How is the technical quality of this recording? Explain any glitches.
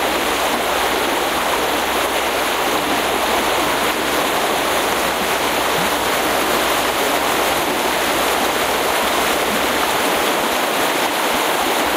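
No glitches or faults are audible.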